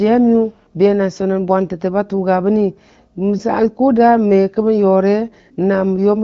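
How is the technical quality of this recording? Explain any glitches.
No glitches are audible anywhere in this recording.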